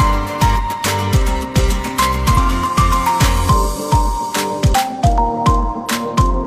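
Damaged data in a compressed stream corrupts a short run of the encoded audio from 2.33 to 2.38 s, about 50 ms. Bytes in that stretch no longer form valid frames, so the decoder misreads or discards them, loses its place in the stream, and has to hunt for the next intact frame header before normal decoding resumes. The result is a brief blip or squawk that cuts into the sound at that point.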